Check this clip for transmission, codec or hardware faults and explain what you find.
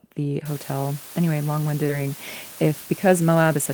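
Three faults are present: a coarse, dithered quantisation hiss, a forward jump, and a short hurried stretch.

Low bit depth with dither runs from 0.46 s to the end of the clip. The speech is carried at about 6-bit resolution, and noise was added before rounding. That decorrelates the rounding error from the signal, so it becomes a steady, even white hiss, roughly 20 dB below the speech. There is no grainy or gated distortion that follows the syllables.

A skip ahead occurs between 1.89 s and 1.91 s. Something like 0.7 s of speech was discarded while later audio was already queued, most likely through packet loss or a jitter buffer dropping its overflow. Nothing fills the gap, so the speech on either side is butted together almost directly. It sounds like an abrupt jump in which part of the utterance simply never arrives.

A jitter buffer speed-up runs from 2.63 s to 3.58 s. The receiver was holding more audio than its target, so it trimmed short pitch-period-sized slices repeatedly to pull the delay back down, about 70 ms in total. 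Playback runs at about 107% of normal speed while the pitch stays unchanged. The speech therefore sounds slightly rushed over that second.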